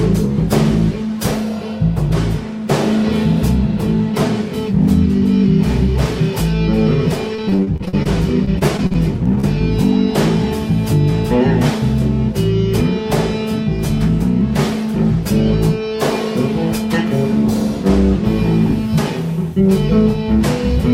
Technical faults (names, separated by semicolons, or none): repeated packet loss (robotic sound)